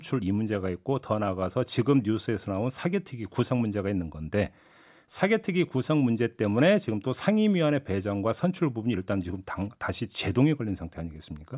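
No technical faults can be heard anywhere in the speech recording. There is nothing in it to mark with a time or describe as a problem.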